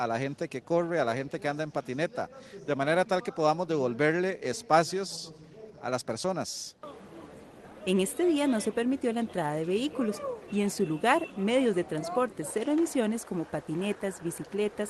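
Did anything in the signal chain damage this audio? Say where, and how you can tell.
Yes. The damage is at the network and buffer stage. Clock drift between sender and receiver runs through the whole clip: the sender's clock is roughly five percent fast, so samples arrive faster than the receiver plays them and its jitter buffer keeps filling.

To keep that buffer from overflowing, the receiver makes repeated timing corrections from 0.07 s to 14.73 s, trimming short pieces at uneven intervals. The trims amount to playback running at about 105 percent. The Opus call codec limits the audio to 12 kHz.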